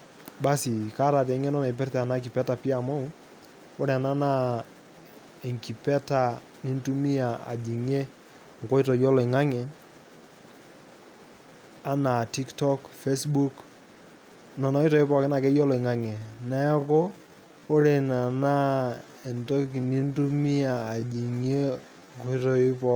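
From 15.96 s to the end, after "pookin akeyie", a time-stretched section slows the speech to about 0.62 speed with unchanged pitch, sounding dragged; likely stretching software repeating short pieces. Spectrogram harmonics stay level while syllables lengthen.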